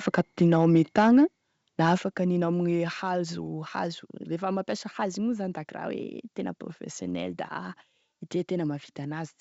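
From 0.07 to 1.18 s, and again briefly from 1.85 to 1.93 s, the loudest syllables turn harsh and crackly. This is microphone overload, likely from input gain set high enough that peaks ran about 3 dB and then about 2 dB past the converter's ceiling. On a waveform the tops are sliced flat across a small fraction of samples, and a spectrogram shows broadband splatter at each clipped peak.

At 1.98 s the speech and background noise drop together in a single step, about 6 dB quieter. This is the microphone volume stepped down, likely the call software reacting to the distorted peak just before. The waveform envelope narrows abruptly, and the spectrogram dims uniformly across all frequencies at that instant. The wideband G.722 telephone coding shows little or no audible damage.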